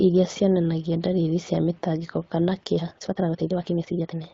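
From 2.74 s to the end, after "ndariri cia mĩtangĩko kana", speech runs 1.87 times faster at unchanged pitch, rushed, likely a time-stretched section with short pieces dropped.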